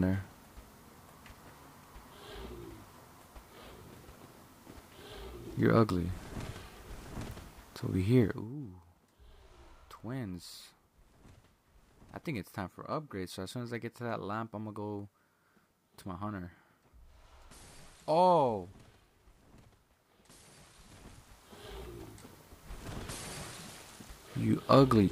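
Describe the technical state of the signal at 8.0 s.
At 8.0 s the signal is intact, with no fault to be heard at that moment.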